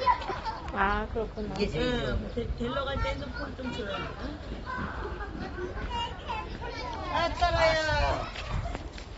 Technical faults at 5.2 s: AAC compression

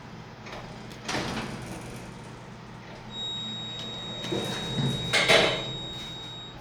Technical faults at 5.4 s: feedback whistle

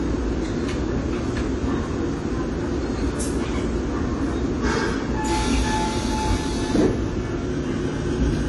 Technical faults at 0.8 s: AAC compression

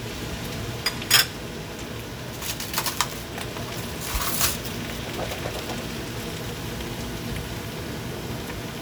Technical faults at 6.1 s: none

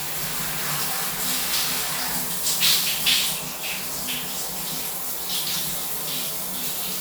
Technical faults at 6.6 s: none

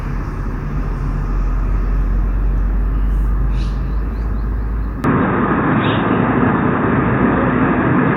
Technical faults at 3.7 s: none

